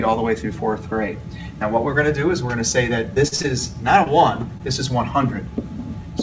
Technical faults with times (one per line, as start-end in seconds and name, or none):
3.14-3.46 repeated packet loss (robotic sound)
4.04-4.08 short concealed packet loss
4.58-4.62 short stall from a late packet